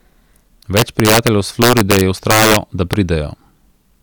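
From 0.77 s to 2.56 s the speech is hit by integer overflow. The signal is driven about 6 dB past the largest value the integer format can hold. Nothing limits it, so each loud peak wraps around to the opposite sign. The waveform jumps across its full range. Violent cracks burst out on the louder syllables, harsher than clipping. At 2.93 s one more overflow crack appears. Here the overdrive is only about 1 dB, so it is a single sharp snap.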